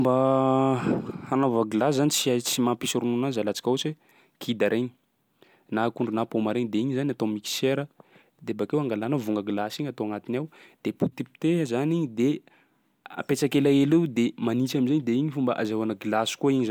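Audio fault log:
Nothing stood out on listening to this speech recording.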